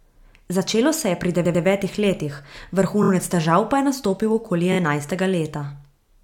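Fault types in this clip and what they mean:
Repeated frames: chunks of the compressed stream went out more than once, so the decoder replays them and the speech stutters. A 93 ms block plays twice extra at 1.44 s, and 23 ms bits, each about one frame, loop at 3.02 s and 4.72 s.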